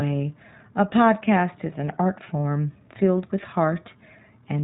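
From start to end the speech carries plainly audible iLBC codec damage. Nothing above about 3.8 kHz survives, giving a boxed-in narrowband sound, and each short frame's excitation is coded on its own, leaving a rough, synthetic edge consistent with 20 ms frames.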